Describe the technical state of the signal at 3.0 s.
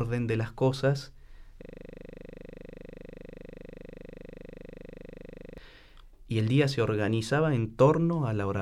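At 3.0 s the audio sits inside a system hang loop running from 1.62 to 5.58 s, right after "de las cosas". The system froze while the sound hardware kept replaying one 40 ms piece of the ring buffer, close to a hundred identical times. Heard at 25 Hz, the result is a steady mechanical buzz rather than a machine-gun stutter, and its exact, unvarying repetition sets it apart from packet-loss concealment.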